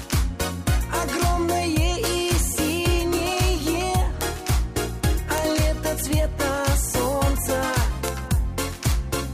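The audio carries six bit error spikes, at 2.06, 3.48, 4.21, 5.38, 8.08 and 8.92 s. Each is a single sharp, broadband tick that has nothing to do with the surrounding sound. The ones at 2.06, 4.21 and 5.38 s hit about 0 dBFS, the 8.08 and 8.92 s ticks reach about -6 dBFS, and 3.48 s about -12 dBFS. That points to a flipped bit in storage or on a digital link jolting one to three samples, then snapping straight back.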